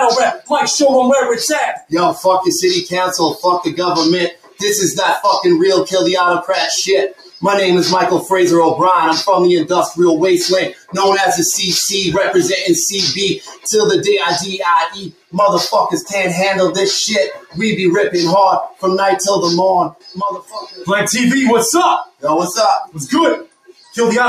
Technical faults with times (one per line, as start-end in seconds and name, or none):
0.00-24.29 noise suppressor applied to music or sounds
0.34-8.31 sound cut by the noise suppressor
9.88-10.97 sound cut by the noise suppressor
13.36-23.97 sound cut by the noise suppressor